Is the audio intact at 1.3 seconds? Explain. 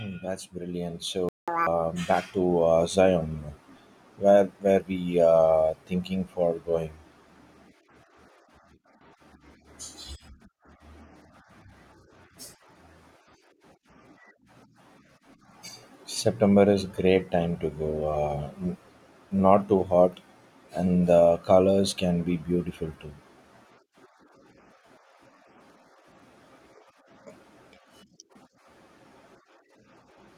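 No. At 1.3 seconds the speech is inside a playback stall running from 1.29 to 1.48 s, about 189 ms of silence. The speech halts mid-flow and then carries on. The likely cause is the player running short of data or its thread being blocked, so output simply stopped until it recovered. Unlike a brief dropout, which is a click-length gap, this pause is long enough to hear as a hitch in the flow.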